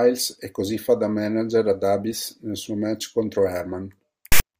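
At 4.32 to 4.40 s, file tags played as audio: text metadata is decoded as samples, producing an abrupt, hard-edged, lopsided rasp lasting about 80 ms near the end of the speech.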